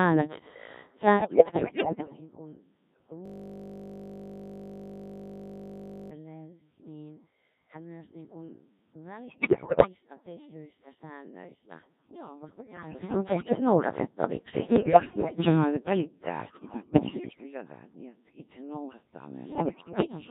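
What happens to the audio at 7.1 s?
At 7.1 s the speech is still passing through the Codec 2 vocoder, which affects the whole clip, not just this moment. The heavy damage fits its 1.3 kbit/s mode. Only pitch, voicing, energy and a rough spectral envelope survive, and the decoder rebuilds the voice from sine waves, so it sounds robotic and buzzy. Unlike the swirly, watery artefacts of a low-bitrate transform codec, the original waveform is simply gone.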